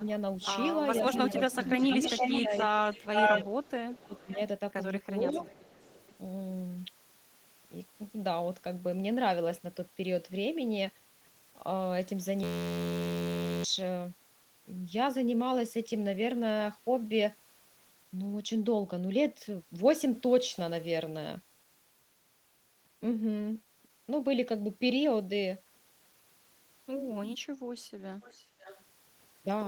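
From the opening instant to 6.09 s the speech repeatedly dips and thins. At 0.0, then 1.47 to 2.51 s, the drops are slight, about 5 dB. From 3.28 to 4.38 s it sinks by up to about 25 dB for nearly a second, and at 5.22 to 5.46 s by about 10 dB. This is speech suppressed in double talk: with both sides active, the echo canceller likely mistook this talker for its own echo and turned it down. Overlapping this, an echo leak returns a delayed copy of the voice about 0.46 to 0.47 s late. From 0.41 to 3.45 s it is roughly as loud as the speech, while at 4.03 to 4.36 s and 5.23 to 6.09 s it is a faint residue, about 25 dB down. The far end's echo canceller likely let loudspeaker pickup back into the call. From 12.43 to 13.64 s a steady buzz replaces the speech. This is a system hang loop: a short 11.61 ms piece repeats at 86.1 Hz, which fits a frozen driver cycling a 512-sample buffer and costs about a second of audio. 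At 28.22 to 28.83 s the echo leak returns, about 20 dB down and 0.53 s late.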